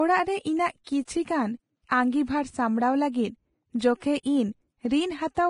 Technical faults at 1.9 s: Vorbis compression; pre-echo

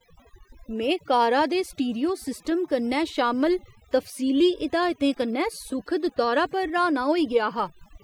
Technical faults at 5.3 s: overdone noise removal

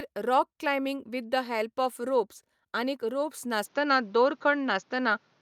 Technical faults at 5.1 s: input switched to a poorer device

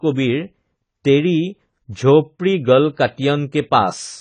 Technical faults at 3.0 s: AAC compression

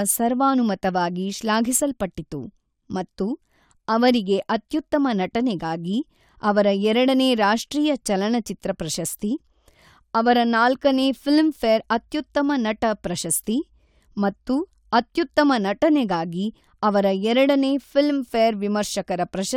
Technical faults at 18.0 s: none

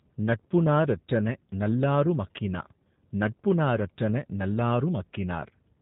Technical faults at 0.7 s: G.729 codec

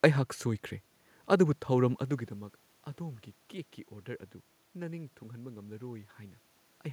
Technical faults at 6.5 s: none

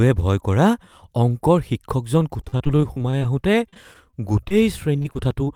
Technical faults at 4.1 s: repeated packet loss (robotic sound)

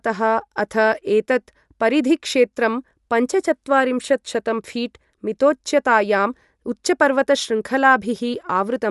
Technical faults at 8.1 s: Bluetooth LC3 compression

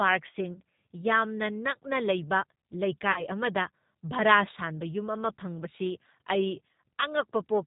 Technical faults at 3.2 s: G.729 codec; VoIP packet loss concealed by the speech codec

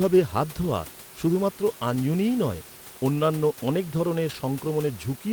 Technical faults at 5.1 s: none

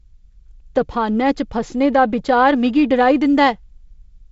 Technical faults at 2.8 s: none

